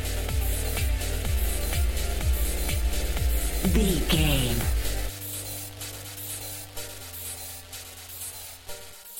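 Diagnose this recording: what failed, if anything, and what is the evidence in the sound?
Resampler restarted on every block, at the sample-rate conversion stage: steady 20 Hz ticking throughout, present only with signal, fitting 44.1 kHz to 48 kHz conversion in 50 ms blocks. Unlike underruns, nothing drops out.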